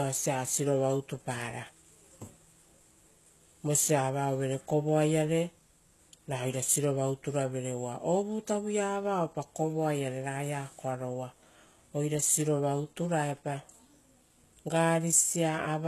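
Speech with HE-AAC compression throughout: s sounds turn metallic and lispy, and treble is rebuilt from lower bands, not simply dulled, stopping near 12.3 kHz, likely from a very low bitrate around 16 kbps.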